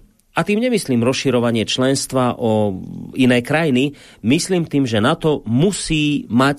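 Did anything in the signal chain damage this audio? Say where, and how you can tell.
No, no signal-chain damage found.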